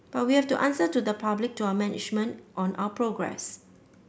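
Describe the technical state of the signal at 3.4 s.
At 3.4 s the speech signal is intact, with no audible fault.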